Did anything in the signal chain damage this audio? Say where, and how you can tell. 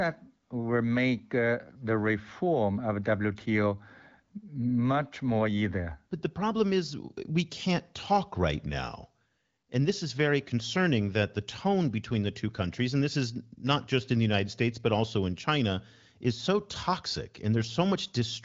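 No, nothing along the way seems to have hurt this speech; it's just a wideband phone-style recording that tops out around 7 kHz, the way an AMR wideband (HD Voice) call at one of its higher rates normally sounds.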